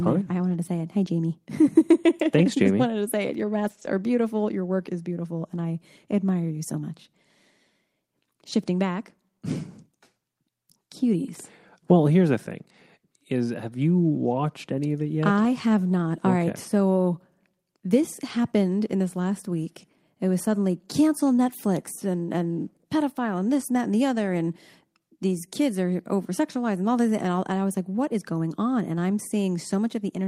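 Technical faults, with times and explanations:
0.49–0.55 s, 3.65–3.87 s and 15.43–15.45 s: lost packet rebuilt from error correction. Packets were lost, and the decoder played the low-bitrate copies carried in the following packets. No gap opens, but about 40, 120 and 20 ms turn rough and noisy: after "fine there I", before "are beautiful" and after "any of it yet".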